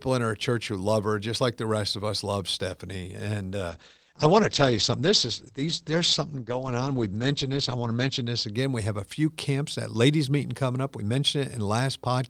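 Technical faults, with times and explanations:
3.71 to 8.59 s, call bitrate drop: the speech turns rough and muffled. The top end gets pulled in from 20 kHz down to 8 kHz and sits at its worst for about 4.6 s before it opens back up. The call's bandwidth estimate fell, so the encoder had to squeeze the speech into far fewer bits. The coarser coding and lost highs fit a fall from around 48 kbps to 12 kbps.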